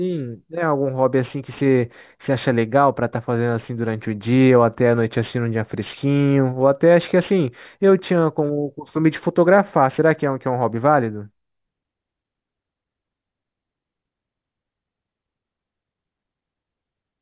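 Aliasing throughout: content above 4 kHz folds back into the speech band, so sibilants turn gritty and metallic rather than simply dulled, as with a clean low-pass.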